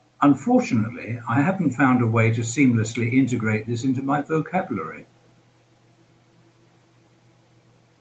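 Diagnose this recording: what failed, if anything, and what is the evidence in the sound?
Nothing stood out on listening; the speech comes through a normal call chain whose upper limit sits around 8 kHz, as expected for the call codec.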